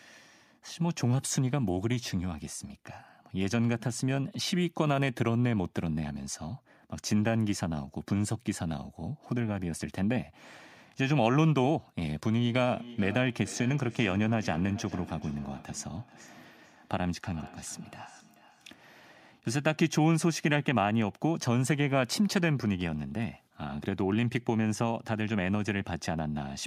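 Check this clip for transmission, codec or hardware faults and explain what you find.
One fault turns up in this speech clip: feedback echo between two devices, from 12.51 to 18.83 s. Each phrase returns roughly every 0.4 s, thinner and ringier on every pass, peaking about 17 dB below the speech. A second device in the room replays the call into this microphone, and that echo canceller cannot remove playback from another device.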